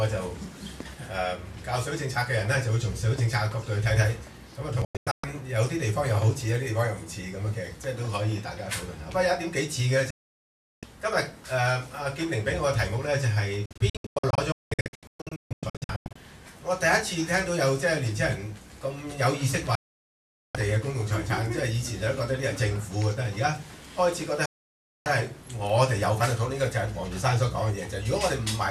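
The sound cuts to silence five times, each with a fade of only 3 ms: from 4.85 to 5.24 s as a cluster of short holes, 10.10 to 10.83 s, 13.66 to 16.16 s as a long stutter of gaps up to 0.19 s each, 19.75 to 20.55 s, and 24.46 to 25.06 s. This is digital broadcast dropout. The receiver muted whenever frames failed, and that stretch of programme is lost.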